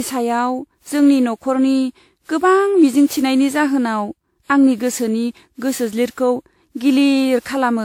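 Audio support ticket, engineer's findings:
Swirly, hollow speech throughout, blurred onsets, nothing above 17.5 kHz. Likely generation loss: about seven lossy re-encodes, quantisation errors stacking across shifted frame grids.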